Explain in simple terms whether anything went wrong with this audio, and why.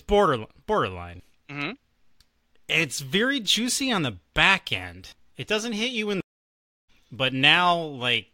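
At 6.21 s, right after "doesn't hit you in", the speech goes silent for about 0.64 s in a stream reconnect. It resumes about 0.7 s further on, skipping material, unlike a simple dropout.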